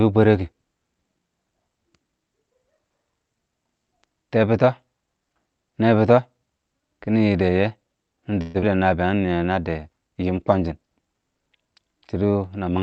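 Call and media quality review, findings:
8.41–8.64 s: last sound carried on as a fading buzz for about 0.21 s, never dropping to silence; about 0.1 s of audio missing on resumption. Likely long network dropout with concealment fill. Unlike brief packet loss, the fill is long and content is skipped. Playout delay grows by around 50 ms.

9.06–9.44 s: audio runs slow, about 82% speed, at unchanged pitch; sounds drawn out, 77 ms added. Jitter buffer slow-down, repeating single pitch periods to rebuild reserve. Pitch stays put, unlike a clock or resampling error. Opus band limit near 8 kHz throughout.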